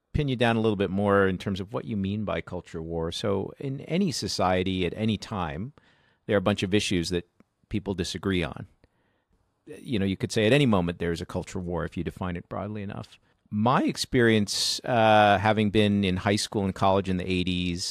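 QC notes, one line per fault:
No faults found in the speech. Nothing in it calls for a timestamped entry.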